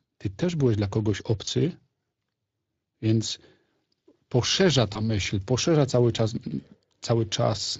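Throughout, the speech carries Speex codec damage that is plainly audible: a hoarse, grainy roughness on voiced sounds, which fits a Speex stream at around 20 kbps. The CELP coder has too few bits to model the excitation faithfully, so the fine structure of the voice is replaced by noisy approximations. Unlike the swirly, watery artefacts of transform codecs such as MP3 or AAC, this damage sits inside the voice itself as rasp and coarseness.

From 1.45 to 1.49 s, and again from 4.93 to 5.00 s, there is VoIP packet loss concealed by the speech codec. Each event sounds like a single lost 20 ms packet. The decoder filled the gap by extending its last pitch and filter settings, so the sound briefly smears into a short held buzzy tone or coloured noise that sags in level. It then stays weak or distorted for a few tens of milliseconds while the decoder recovers. A plain dropout would instead leave a hard silent gap or a click, with no synthetic tone bridging it.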